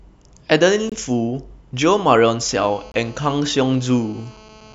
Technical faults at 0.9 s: gap between chunks

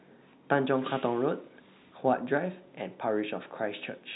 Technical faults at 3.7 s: none

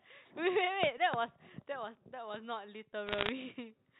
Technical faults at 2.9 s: audio missing between chunks

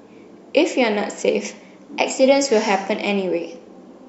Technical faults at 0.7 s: none

